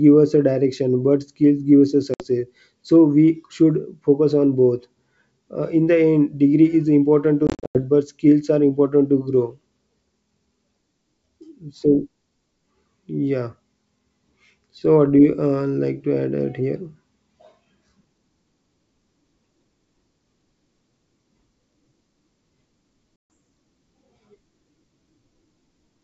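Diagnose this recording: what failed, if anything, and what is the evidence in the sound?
The failure is at the network stage: packet loss on an ADPCM call, carried over G.722 at 64 kbit/s. Hard-edged silent holes replace the missing packets. At 2.14 to 2.25 s, after "give us a", about 60 ms goes missing. From 7.47 to 7.79 s, between "degree is important to" and "but skills are important", gaps totalling 220 ms are scattered across 280 ms, the longest 90 ms. At 23.21 s about 140 ms drops out. After each hole the decoder's predictor and step size no longer match the sender's. So the speech returns slightly distorted, until it resynchronises within tens of milliseconds.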